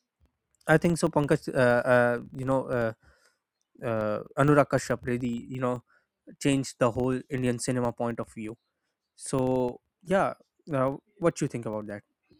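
From start to finish the speech carries a filter restarted on every block: each block begins from zero state, so a small transient kicks off every one. That adds up to a ticking buzz at about 23.4 Hz, consistent with 2048-sample blocks, rising and falling with the speech level.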